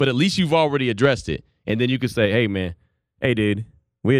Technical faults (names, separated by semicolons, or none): channels drifting apart